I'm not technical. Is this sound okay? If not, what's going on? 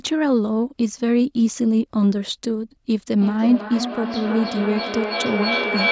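No. From 3.18 s to the end, there is feedback echo between two devices: speech returns about every third of a second, nearly as loud as the original.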